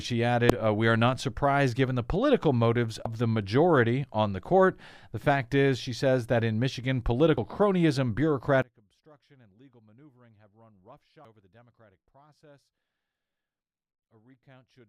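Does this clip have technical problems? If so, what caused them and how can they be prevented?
Yes. Damaged data in a compressed stream causes brief glitches at 0.50, 3.06 (between "given the political motives" and "the majority on the"), 7.38 and 11.25 s. Each time, the decoder loses frame sync, leaving a thin broadband vertical streak on a spectrogram. Checksummed storage and transfer, with error-detecting containers, prevents this.

From 8.62 s to the end, the speech drops by about 31 dB in mono, likely because one channel is inverted, so the centred voice cancels. The waveform shrinks sharply. Checking polarity and mono compatibility before release prevents it.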